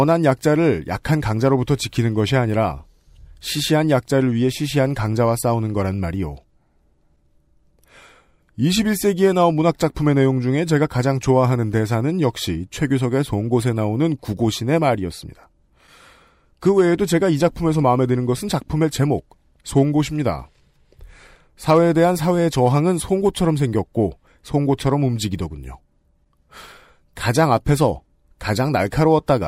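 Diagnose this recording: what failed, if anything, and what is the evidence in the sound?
Nothing has gone wrong anywhere along the chain on this speech recording; there's no audible damage to diagnose.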